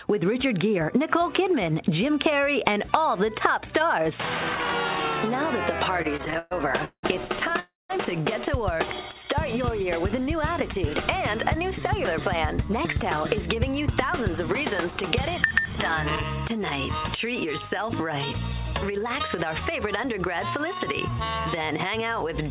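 Repeated stalls (stutter) run from 6.02 to 7.60 s. Packets kept arriving late, so the jitter buffer emptied eight times. Each gap was filled by stretching the last sound, the longest about 183 ms, and together they cover a quarter of that stretch. The audio drags and hiccups while nothing is lost.

A call audio freeze follows at 7.60 to 7.91 s. The sound holds and fades for about 300 ms, with roughly 180 ms of near-silence, then resumes where it stopped. The likely cause is packets held up in transit, which drained the buffer and pushed the delay up by the same 300 ms.

A jitter buffer speed-up runs from 12.72 to 16.50 s at 104% speed. The receiver repeatedly cut short pitch-period pieces to shed the extra delay built up earlier, about 200 ms in all, so the audio runs slightly faster at unchanged pitch.

A second jitter buffer speed-up, from 18.52 to 21.15 s at 103%, trims a further 70 ms or so. 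Throughout the clip nothing is heard above 4 kHz, which fits the narrowband G.711 A-law call codec.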